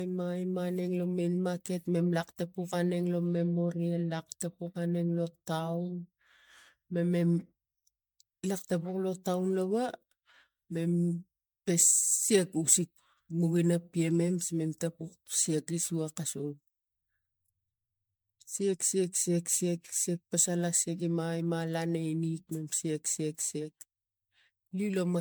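Speech with generation loss from start to finish: it has most likely been decoded and re-encoded about seven times through a lossy codec, with a character that fits MP3 at around 128 kbit/s. Each pass requantises on a shifted frame grid, so the errors stack. The result sounds swirly and hollow, with smeared, blurred consonant attacks and a smeared texture worse than that bitrate alone would give, even though content still reaches 20 kHz.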